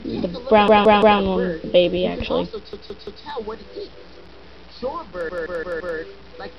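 Clock drift buffer slips run from 0.38 s to the end, as a click about every 0.95 s while sound is present. Two devices on independent clocks likely disagree by around 200 ppm, so the buffer between them drifts until a few samples are dropped or repeated.

Repeated buffer faults occur at 0.68–1.20 s, 2.73–3.24 s and 5.29–5.97 s. New audio arrived late, so the same 171 ms block replayed three extra times in the first two and four in the last. Each is a looping stutter with hard joins, fitting an 8192-sample buffer.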